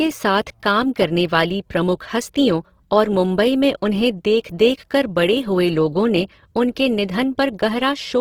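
From start to finish, the speech has a grainy, rough texture, with voiced sounds breaking into a hissy, noise-like fizz. This is most likely Opus compression in its music (CELT) mode, at a rate that fits about 16 kbps. The encoder keeps each band's energy but fills the fine detail with folded or noise content, so the damage is plainly audible. A spectrogram shows content up to about 20.3 kHz, few holes, and harmonics smeared into speckled noise.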